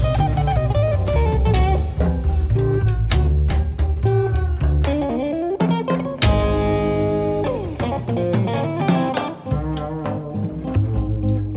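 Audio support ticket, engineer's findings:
No faults found in this audio.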